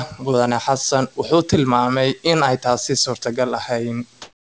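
Speech clip whose background from 4.22 s to the end is replaced by comfort noise, likely because discontinuous transmission halted the sender after speech stopped. The background, about 37 dB below the loudest passages, shifts level by about 6 dB. A spectrogram shows a smooth, textureless noise band, capped at 8 kHz like the rest of the call-codec audio. The waveform shows an even, featureless hiss.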